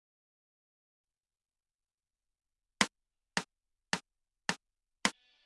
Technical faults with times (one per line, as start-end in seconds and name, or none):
none